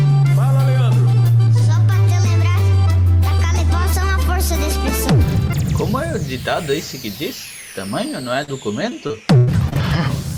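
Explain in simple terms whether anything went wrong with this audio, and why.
Near the end, a small piece of the sound failed to arrive in time to be played. At about 8.43 to 8.50 s, roughly 40 ms went missing, a case of short concealed packet loss. The player covered the hole by stretching out the sound that came just before and then blending back into the real audio. You hear this as a brief smear or wobble, and a very short sound at that moment may disappear.

Soon after, between about 8.90 and 9.77 s, the same delivery problem strikes again and again, which is repeated packet loss (robotic sound). Six separate holes open up in that stretch, the longest about 0.1 s, and together they add up to about 0.2 s, close to a quarter of that stretch. Each hole is patched the same way, but the next one follows almost at once, so the sound turns choppy, with bits missing.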